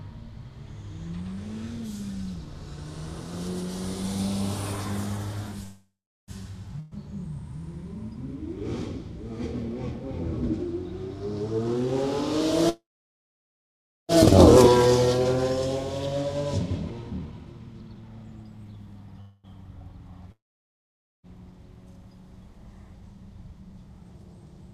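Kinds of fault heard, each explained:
Call audio freeze: audio halts at 5.63, 12.69 and 19.21 s, fading into a fill or silence (1.4 s at 12.69 s), then resumes intact, likely from delayed packets.
Burst of packet loss: at 6.80 s a fading fill of about 0.12 s replaces lost packets, and the sound resumes further on with that stretch missing.
Jitter buffer speed-up: from 11.5 to 21.5 s the sound runs 5% fast at unchanged pitch as short pitch-period pieces are cut, removing about half a second.
Long network dropout: from 20.32 to 21.26 s the sound fades to near silence and returns with about 0.92 s gone, likely from packets never arriving.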